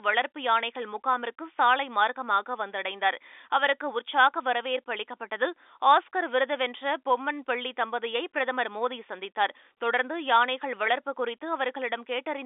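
No faults are audible in the speech, which sits in a telephone band of roughly 300 Hz to 3.6 kHz with nothing above 3.8 kHz, consistent with normal G.711 telephone coding.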